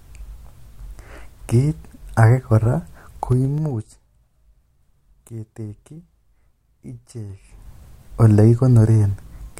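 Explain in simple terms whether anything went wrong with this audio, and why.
Two spots in this speech have zipper noise. From 3.26 to 4.06 s the level drops a long way, and from 7.26 to 7.71 s it comes back up. Instead of gliding, the volume jumps in coarse steps, about seven a second going down and about fifteen a second coming up. Each jump leaves a tiny click, so you hear a ticking, zipping texture riding on the speech while the level moves.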